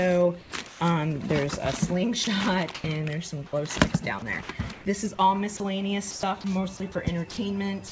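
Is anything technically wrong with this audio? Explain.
Yes. From 0.41 to 0.80 s there is comfort noise in place of the background. Roughly 240 ms of real background becomes steady, featureless hiss, likely from discontinuous transmission. Unlike chopping, it happens once, in a pause. From 2.24 s to the end, the sound is chopped by the voice detector. It repeatedly switches off, so about 0.55 s of quiet sound edges turn into synthetic noise. This is likely a detector misjudging the quiet passages. Through the call path, nothing is heard above 8 kHz, which fits a G.722 codec.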